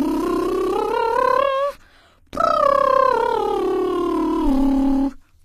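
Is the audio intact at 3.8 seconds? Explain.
No. At 3.8 seconds the music carries plainly audible damage that runs through the whole clip, likely from HE-AAC compression. The treble is rebuilt from copied lower bands, which fits a low bitrate around 20 kbps. It sounds gritty and metallic, with nothing above 14.9 kHz.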